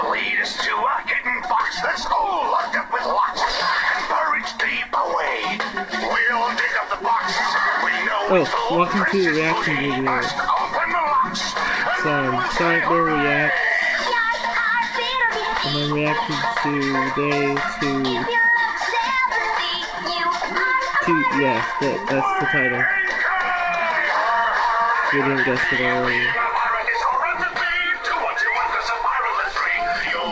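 At 27.54 s a 20 ms stretch of the sound is replaced by a brief patch of steady, featureless noise before the signal resumes, with the band already limited to nothing above 8 kHz by the call codec. The likely cause is sound dropped by the voice detector: the sender judged that instant to be background, stopped transmitting, and the receiver filled the gap with comfort noise.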